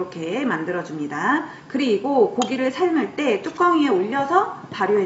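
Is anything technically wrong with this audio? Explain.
No, nothing technically wrong can be heard in this audio. No working path is listed to comment on, so there is nothing further to point out.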